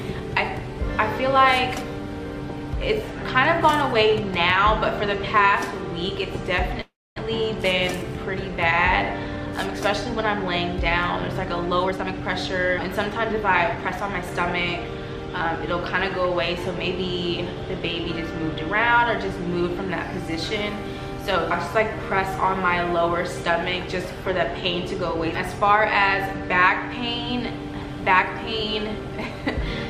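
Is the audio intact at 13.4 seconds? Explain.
No. At 13.4 seconds the audio is inside a jitter buffer speed-up running from 11.85 to 14.30 s. The receiver trimmed short pitch-period slices repeatedly to drain excess buffered delay. Playback runs about 13% fast at unchanged pitch, sounding hurried, with roughly 0.3 s removed.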